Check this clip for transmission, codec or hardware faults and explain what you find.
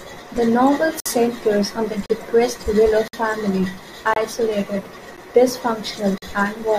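The speech has a gap between stream segments, at 1.00–1.06, 2.06–2.10, 3.08–3.13, 4.14–4.16, 5.17 and 6.18–6.22 s. Timestamps on 1-second segments leave 10–55 ms holes filled with silence: hard-edged dropouts, flat waveform, blank vertical spectrogram stripes.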